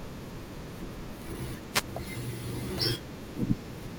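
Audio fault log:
1.71–1.84 s, wireless microphone noise hit: a short burst of static, about 130 ms, cuts across the speech and then clears. That's the analogue FM radio link fading for a moment, with reflected copies of the signal cancelling the direct one at the receiver. As the signal drops, the receiver's own noise rises and washes over the voice, which is why it comes through as a quick swish of hiss.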